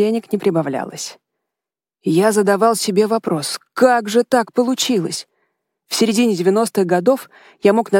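Clock slip clicks run from 0.35 s to 7.55 s as faint, regular ticks roughly every half second, around fifteen in all. Each is a single sample dropped or repeated, likely because two unsynchronised clocks drift apart by something like 40 ppm.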